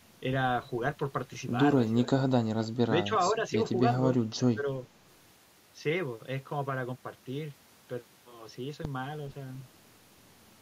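Speech with three brief dips in level, at 2.05 to 2.11 s, 2.57 to 2.70 s and 4.54 to 4.66 s, the deepest falling by around 20 dB. On a waveform these appear as sudden pinched sections of the envelope; a spectrogram shows short vertical gaps fading across the band. The pattern points to speech suppressed in double talk, likely an echo canceller mistaking the near talker for loudspeaker echo and turning it down.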